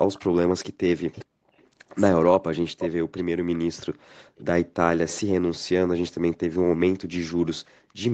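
Echo leak at 0.13 to 0.27 s: a faint copy of the speech about 25 dB down trails the original by 413 ms, likely because the far end's echo canceller let its loudspeaker pickup through. The same delayed copy returns at 1.15 to 1.19 s, around 40 dB down; at 1.57 to 1.68 s, about 35 dB down; and at 4.36 to 4.44 s, about 30 dB down.

Speech suppressed in double talk, 1.05 to 1.29 s: the speech dips sharply, by around 40 dB at its deepest, in pieces adding up to about 200 ms. This likely happened because the echo canceller, facing talk from both sides at once, turned everything down, including the near talker.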